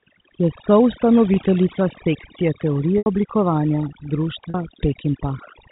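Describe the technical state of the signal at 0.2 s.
At 0.2 s the speech shows overdone noise removal, present throughout the clip. Bands sitting near the estimated noise floor are cut far down or off, so the background drops and breaks up into twinkling specks. Quiet speech detail goes too. Over the telephone band, the G.711 coding adds only faint damage.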